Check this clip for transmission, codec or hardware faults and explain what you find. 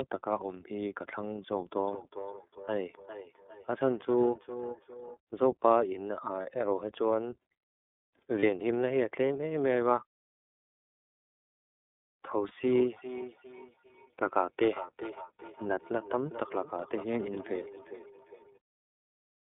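The clip shows three faults: iLBC codec damage throughout, feedback echo between two devices in two stretches, and three brief lost iLBC frames.

iLBC codec, whole clip: the sound is squeezed into a 250 Hz to 3.6 kHz line band, and each frame's excitation is coded independently at a low rate, which fits iLBC at about 13 kbps with 30 ms frames. The result is plainly rough, slightly synthetic speech with no bright top end.

Feedback echo between two devices, 1.72 to 5.18 s and 12.64 to 18.59 s: a second device in the same room replays this call, and the microphone recaptures it beyond its echo canceller's reach. Each syllable returns roughly every 400 ms, thinning and ringing, at most about 15 to 16 dB below the speech.

Lost iLBC frames, at 6.42 s, 8.40 s and 12.48 s: each gap spans about one 30 ms frame. The decoder fills the hole by repeating the last pitch cycle with added noise, heard as a brief buzzy, held vowel. 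Because frames stand alone, clean speech returns immediately afterwards.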